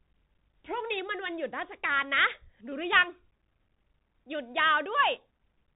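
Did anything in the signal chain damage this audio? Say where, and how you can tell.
Yes, at the codec stage, for the whole clip. The speech is thin and boxed in, with nothing above about 4 kHz. A grainy hiss sits under it, s sounds turn scratchy, and louder, brighter moments break up. This is the Bluetooth CVSD headset codec, and the sound fits a 64 kbit/s one-bit stream. Each sample only steps up or down by an adaptive amount, so fast rises outrun the step and distort, and small steps leave a granular noise floor.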